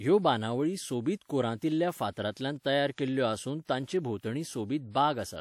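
Pre-echo sits at 3.61 to 3.67 s in this speech clip, just after "तयार केल्ल्यो आसून": a short hiss spreads about 58 ms ahead of a sharp onset. The transform codec's block noise, sized for the loud attack, leaks into the quiet moment preceding it, smearing the onset.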